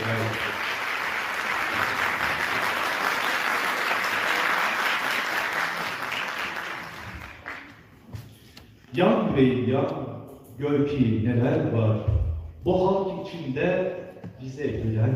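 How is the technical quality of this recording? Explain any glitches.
There's one real glitch here, a short burst of processor overload crackle from about 5.41 to 5.60 s. For that fifth of a second the machine couldn't finish its little audio buffers on time. Each one it missed, apparently somewhere around 10 ms of sound, was simply skipped, leaving a hard-edged hole. A handful of those misses in quick succession jumble together into a gritty, tearing crackle over the sound, and then it stops as soon as the load eases.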